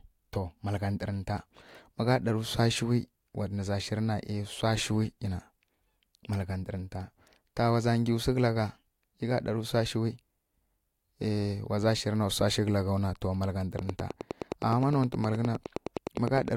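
A train of clicks runs from 13.79 s to 16.49 s, near the end of the speech. Evenly spaced pulses arrive at 9.7 per second, around thirty in all, each with much the same sharp shape and peaking roughly 10 dB above the speech. They tick over the talking and through the gaps alike. The steady pace points to likely interference from nearby equipment or a faulty connection or power supply.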